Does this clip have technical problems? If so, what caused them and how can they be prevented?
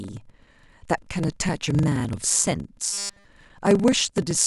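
Yes. A block size mismatch (padded) runs throughout: a 23.4 Hz buzz and 0.938× speed, which fits shorter blocks zero-padded into 1024-sample reads. The waveform shows regular silent notches. Prevent it by matching block sizes between stages.

From 2.93 to 3.25 s there is a robotic sound with a rigid 200 Hz buzz, likely from repeated short buffers replaying a 5 ms slice entirely in place of new audio. A spectrogram shows evenly spaced 200 Hz harmonic stripes. Prevent it with larger buffering so new audio arrives on time.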